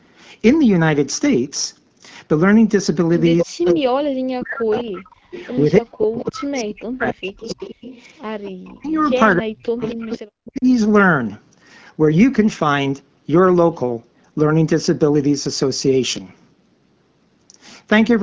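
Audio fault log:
3.38 to 3.73 s, 4.77 to 5.63 s and 6.2 to 10.47 s, echo leak: the far end's echo canceller likely let part of its loudspeaker pickup through. A copy of the speech returns 268 ms late, loud in the first burst and much fainter in the second and third.
3.42 to 4.71 s, 5.34 to 7.61 s and 8.66 to 10.66 s, speech suppressed in double talk: with both sides talking, the canceller likely mistook the local talker for echo and clamped the microphone. The speech dips sharply, by around 40 dB at worst, in broken pieces.
5.05 to 5.31 s, background gated by the echo canceller: while the loudspeaker was active, the canceller pulled the microphone down hard. The room sound falls away by about 25 dB for roughly a third of a second, then returns as the gate releases.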